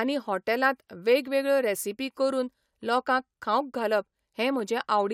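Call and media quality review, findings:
Single sharp click at 4.60 s, likely dropped samples: a fraction of a millisecond went missing, so the waveform jumps to a later value. Worth checking the buffer handoff.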